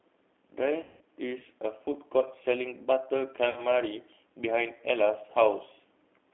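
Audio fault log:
throughout, G.729 codec: the audio sounds narrow, slightly rough and synthetic, held between 300 Hz and 3.5 kHz, which fits G.729A's model-based coding at 8 kbit/s.
0.83–1.01 s and 3.50–3.60 s, VoIP packet loss concealed by the speech codec: the sound smears into a fading buzzy tone or coloured noise as the decoder extends its last pitch and filter across 180 ms and 60 ms gaps.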